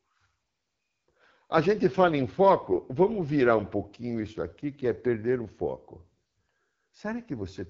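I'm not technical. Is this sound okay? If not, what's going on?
No. The speech went through the AMR wideband (HD Voice) codec at one of its lowest settings, which rebuilds the voice from a rough model. Throughout, it sounds rough and raspy, with nothing above about 7.5 kHz, so it lacks crispness.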